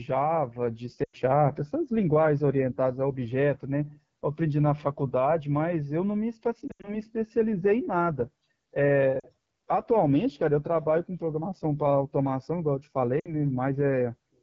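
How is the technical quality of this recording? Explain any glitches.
Technical quality is poor: the whole recording carries plainly audible codec roughness, and speech drops out briefly four times.

The AMR wideband (HD Voice) codec runs throughout at 8.85 kbit/s, one of its lowest rates. The vocal tract model has too few bits, so speech sounds raspy and rough. A spectrogram shows detail ending near 6.4 kHz, a smooth noise fill up to 7 kHz, and nothing above.

Lost AMR speech frames occur at 1.03 to 1.16 s, 6.68 to 7.01 s, 9.19 to 9.28 s and 13.20 to 13.35 s. The decoder repeats the last good pitch and vocal tract settings at falling gain, so the sound smears and fades before recovering roughly. On the waveform the envelope sags; the spectrogram shows frozen, blurred harmonics. Each gap lasts about 40 to 120 ms.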